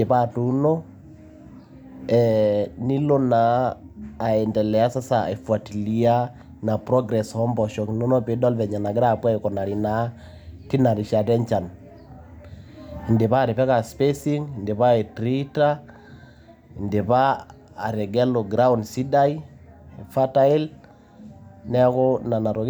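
No technical faults can be heard anywhere in this speech recording. There is nothing in it that needs a time mark or a description.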